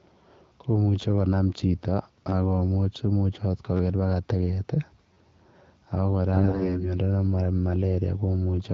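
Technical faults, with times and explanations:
6.34–6.88 s, AMR bit errors: the speech turns hoarse and gargly but keeps pitch and level, unlike a dropout. Roughly one in ten unprotected bits flipped, misplacing excitation pulses.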